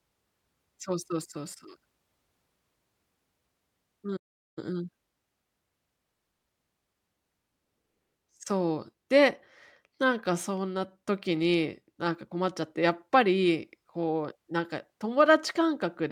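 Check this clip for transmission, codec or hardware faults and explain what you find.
One fault stands out, a playback stall in the speech. From 4.16 to 4.59 s the player likely ran dry or was blocked, so the output drops to silence for about 0.4 s mid-flow before continuing.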